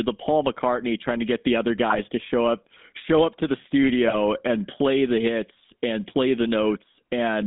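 Across the whole speech clip the GSM full-rate codec is plainly audible. The speech sits in a narrow telephone band of roughly 200 Hz to 3.6 kHz, and the coarse, decimated pulse excitation driving the vocal-tract model gives it a buzzy, gravelly texture that fits a 13 kbps full-rate stream. With only every third excitation sample retained, fine harmonic detail is replaced by a rough, grainy approximation.

GSM bit errors break through from 1.90 to 2.01 s and again from 4.08 to 4.43 s. Corrupted filter, pitch and gain parameters reach the decoder, so individual frames come out with a warped spectrum or a sudden level jump. Both bursts are heard as short squawks, pops and gargling. The first is dense enough to suggest an error rate of a few percent over a handful of frames. The second is longer but sparser, pointing to a few hit frames.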